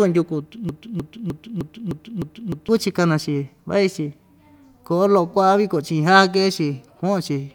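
Speech, with a broken-record loop from 0.69 to 2.69 s: a 0.31 s fragment repeats seven times, exactly and back to back, without the decay of an echo, while the audio meant for that span is lost, likely from a stalled player or stream.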